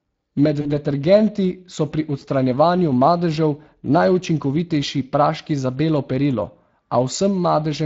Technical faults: Speex codec; VoIP packet loss concealed by the speech codec

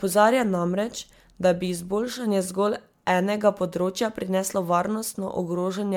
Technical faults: generation loss

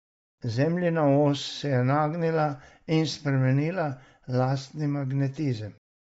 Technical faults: Bluetooth LC3 compression

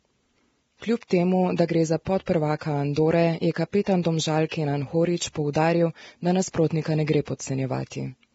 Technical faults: Vorbis compression; pre-echo

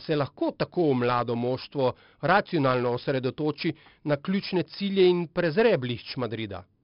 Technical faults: 4-bit ADPCM compression

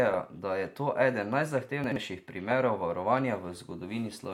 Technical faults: chunks out of order

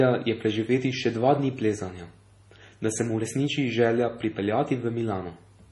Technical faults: MP3 compression

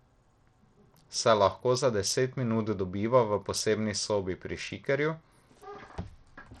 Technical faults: Bluetooth SBC compression

